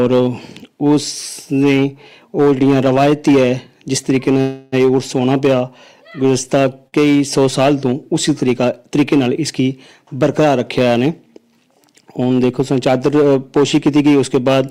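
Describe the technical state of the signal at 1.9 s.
At 1.9 s, as throughout the clip, hard clipping: the signal drives a stage about 7 dB past its limit, so around one sample in twenty is cut flat, producing crackle on loud peaks.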